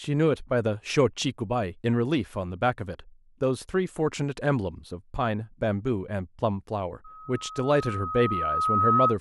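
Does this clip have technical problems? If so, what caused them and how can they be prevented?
Yes. From 7.04 s to 9.17 s there is loudspeaker feedback squeal: the microphone picks up its own loudspeaker, and the loop gain tops one at 1.3 kHz. A tone swells over roughly two seconds to about 5 dB above the speech. Lower the gain, move the microphone away, or notch 1.3 kHz.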